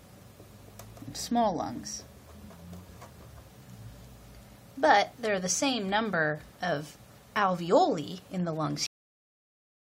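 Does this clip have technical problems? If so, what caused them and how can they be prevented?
Yes, there's a cut-off end: at 8.86 s the audio stops mid-sound and drops straight to digital silence with no decay. The final buffers were never written or played out. To prevent it, flush and drain the output buffers before closing the stream or file.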